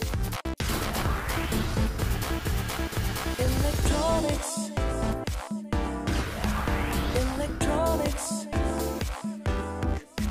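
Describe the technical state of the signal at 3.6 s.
At 3.6 s the signal is intact, with no audible technical fault at that moment.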